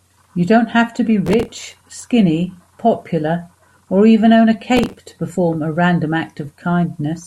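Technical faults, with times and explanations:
1.27 to 2.02 s, processor overload crackle: the processor kept missing its deadlines for buffers only a few milliseconds long, dozens of times over the stretch. Each miss replayed a fragment of old audio with hard edges, so the speech carries a gritty, tearing crackle for about three quarters of a second.
4.74 to 4.98 s, processor overload crackle: a shorter load spike caused a dozen or so missed buffers. Each one was filled with stale audio and its abrupt edges clicked, giving a brief burst of crackle over the speech that stops once the load eases.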